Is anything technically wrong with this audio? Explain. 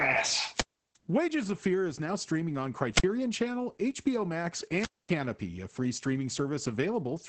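Yes. The speech carries two faults.

Throughout, it has been through Opus voice compression. Nothing sits above about 8.6 kHz, and the heavy damage points to Opus running its SILK linear-prediction coder at a low rate, around 10 kbps, in wideband mode. At that rate the excitation is coded coarsely, so the voice sounds muffled and hoarse, with a slightly robotic edge.

There are also three wireless microphone squelch dropouts: 0.54 to 0.97 s, 2.91 to 3.06 s, and 4.75 to 5.14 s. In each, the FM radio link fades, hiss swells briefly, and the receiver's squelch then mutes the output. The resulting near-silent holes last about 350 ms, 55 ms and 240 ms. Speech then returns.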